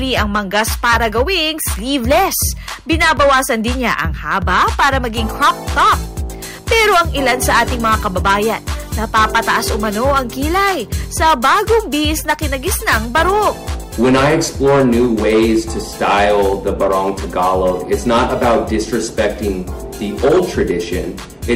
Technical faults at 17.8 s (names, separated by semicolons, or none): hard clipping